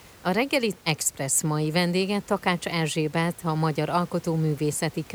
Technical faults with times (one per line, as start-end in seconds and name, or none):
none